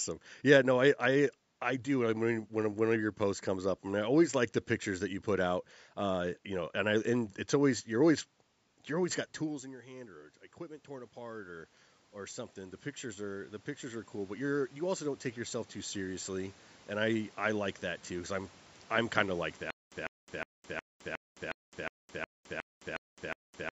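From 9.4 to 16.58 s, after "always you're always got", automatic gain rising slowly lifts voice and room noise together by about 16 dB, rather than the voice alone as when a talker moves. From 19.70 s to the end, after "I'm kind of like", a stutter with silent gaps replays the same 149 ms burst every 362 ms with 213 ms of digital silence between, likely a stalled stream; the gaps set it apart from a seamless loop.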